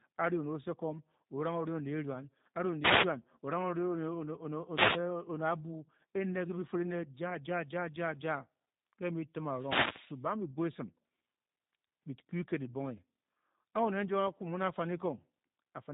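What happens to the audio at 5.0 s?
The analogue FM radio link from a wireless microphone fades as reflected paths cancel, so receiver noise climbs over the signal. From about 4.70 to 5.04 s this wireless microphone noise hit is heard as a short burst of static swishing across the speech.

Throughout, the speech also passes through the G.729 codec (the G.729A variant) at 8 kbit/s, which rebuilds it from a vocal tract model and a few pulses per frame. Nothing above 3.8 kHz survives, leaving a plainly rough, synthetic, band-limited quality.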